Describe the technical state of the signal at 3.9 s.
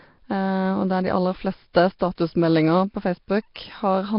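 At 3.9 s the speech carries Nellymoser compression damage, present throughout the clip rather than starting there. The heavy, rough, hissy halo and smeared, underwater quality are likely the Nellymoser Asao codec, which codes short blocks at a fixed, small bit budget and fills starved bands with noise instead of the real signal. Nothing survives above 5.3 kHz, and the coarseness fits a rate of roughly 22 kbps.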